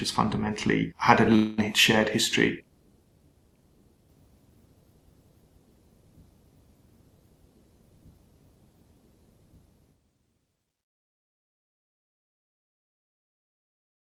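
From 1.35 to 1.60 s, the sound smears into a fading buzz, then resumes with about 220 ms gone. This is likely a long network dropout.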